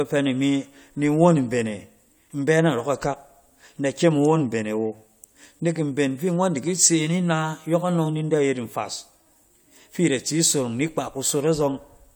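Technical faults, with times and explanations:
No technical faults found in this speech recording.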